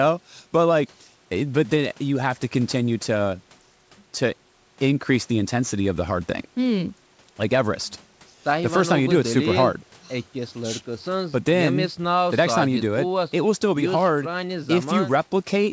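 No technical faults can be heard anywhere in this speech. Nothing is present above 8 kHz, which fits the wideband call codec and the call's microphone processing, with the coding pointing to G.722 at 64 kbps.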